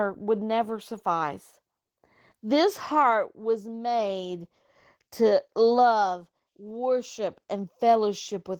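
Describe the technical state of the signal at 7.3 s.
At 7.3 s the speech carries Opus voice compression, which runs through the whole clip rather than appearing at that moment alone. The sound points to a hybrid mode at a rate near 16 kbps: a linear-prediction coder handles the band below 8 kHz while a transform layer covers the top. The excitation is coded coarsely, so the speech sounds plainly hoarse and slightly robotic.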